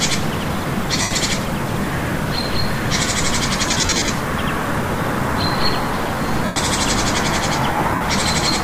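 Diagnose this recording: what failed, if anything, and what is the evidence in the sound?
Lost LE Audio frames on the Bluetooth link: dropouts at 1.02–1.16 s, 3.67–4.10 s, 6.45–6.56 s and 7.95–8.01 s become a noisy smear, not clean silence, because the LC3 decoder reuses the last spectrum with random signs. The run near 1.1 s, roughly a tenth of a second, audibly fades away.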